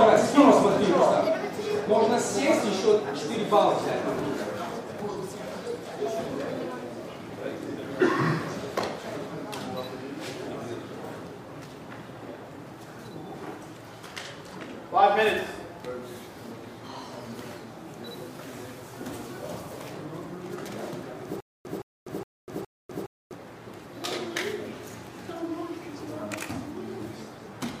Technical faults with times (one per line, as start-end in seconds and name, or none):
18.07-19.89 low bit depth without dither
21.40-23.35 stutter with silent gaps